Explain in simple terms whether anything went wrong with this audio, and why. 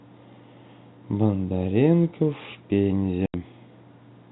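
Some of the audio data was lost in transit, and the receiver played silence in its place, a fault called packet loss filled with silence. At 3.26 to 3.34 s the speech suddenly drops out for about 80 ms, which fits four 20 ms packets, with hard edges at both ends. The narrow, telephone-like sound comes from G.711 telephone coding, which cuts everything above 4 kHz.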